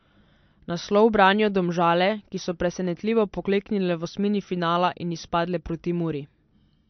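From start to finish the speech carries MP3 compression: nothing survives above 6.1 kHz, so a spectrogram shows a flat ceiling there, with speckled holes below where weak lines drop out frame to frame. It sounds dull and watery, with smeared consonants, fitting a likely low bitrate near 48 kbps.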